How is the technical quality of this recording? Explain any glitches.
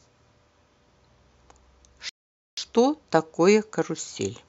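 The speech plays cleanly until one rebuffering stall. From 2.09 to 2.57 s the sound cuts to silence. The player ran out of downloaded audio and waited for more. Speech then resumes exactly where it stopped. Nothing is lost, but about 0.48 s is added.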